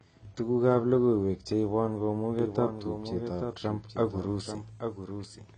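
From the first moment the speech carries plainly audible AAC compression. Nothing is present above 9 kHz, so the top end sounds dull and closed in, and sibilants take on a fizzy, smeared texture. That pairing of a lowered cut-off and coarse quantisation of the remaining frequency lines is what an AAC-LC encoder does when starved of bits; the damage points to a low bitrate, likely around 24 kbps.

At 2.39 s, right after "logoiwek cheibon", a doubled audio track appears and continues to the end. A second full-band copy of the speech runs about a second behind the first, a few dB quieter, so earlier phrases replay underneath later ones and the two overlap confusingly. It cuts in abruptly and has no reverberant tail or room colouring, which marks it as a duplicate signal, likely from the same audio being captured a second time over a slower path.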